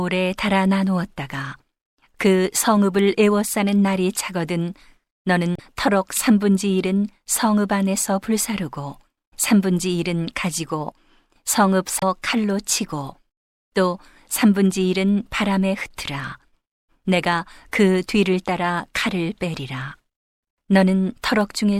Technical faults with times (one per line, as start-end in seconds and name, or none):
5.55-5.60 damaged data in a compressed stream
9.29-9.33 damaged data in a compressed stream
11.98-12.03 damaged data in a compressed stream